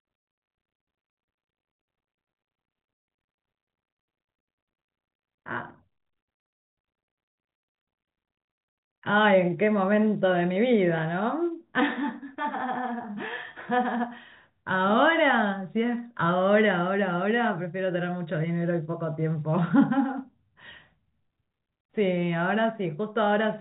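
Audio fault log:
No faults are heard in this speech recording. The G.711 telephone coding path is audible as a band limit, with nothing above about 3.8 kHz coming through.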